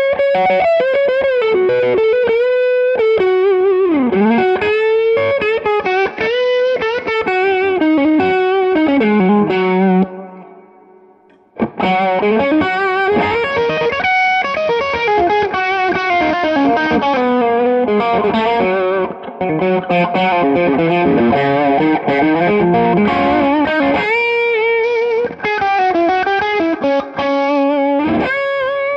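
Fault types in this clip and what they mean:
Bluetooth SBC bit pool drop: Three times, from 5.81 to 7.13 s, 13.52 to 17.2 s and 24.83 to 27.64 s, the treble goes dull and a gritty, grainy noise rises through the sound, then clears as full brightness returns. The wireless link evidently got congested and the sender cut the SBC bit pool, which fits a fall from about 31 to 9, near 72 kbps, starving the upper sub-bands and coarsening the rest.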